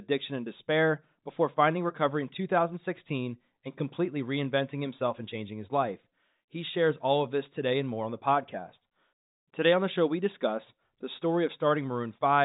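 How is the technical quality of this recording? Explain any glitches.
No glitches to report; the speech sits within a G.711 telephone channel with nothing above about 3.8 kHz, as that format dictates.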